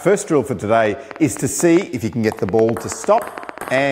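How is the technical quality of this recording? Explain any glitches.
The recording is marred by a train of clicks from 0.86 s to 3.79 s: roughly twenty sharp, similarly shaped pulses at an uneven pace averaging about 7 per second, standing around 10 dB above the surrounding audio. It sounds like irregular ticking laid over the sound. The likely cause is an external pulse source, such as nearby interfering equipment or a faulty connection or power supply. The matching shape and sustained repetition set it apart from a single isolated click.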